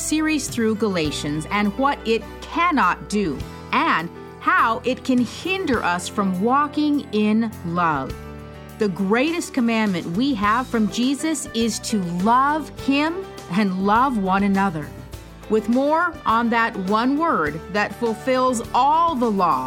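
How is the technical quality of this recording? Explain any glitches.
No technical glitches can be heard anywhere in the recording, and the audio signal stays steady and intact throughout.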